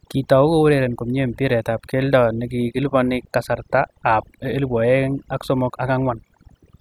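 Overdone noise removal runs throughout the speech: bands near the estimated noise floor are gated away, leaving speech over near-silence flecked with twinkling specks, seen as speckled isolated spectrogram dots.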